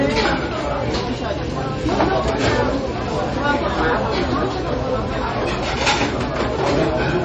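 From start to finish the audio is band-limited, with nothing above 8.3 kHz, and carries plainly audible swirling, watery artefacts and smeared transients. This points to MP3 compression at a very low bitrate, likely around 32 kbps, where the encoder sheds the treble and drops weak frequency lines that flicker in and out between frames. On a spectrogram the energy stops at a flat ceiling near 8.3 kHz, beneath it speckled, patchy holes.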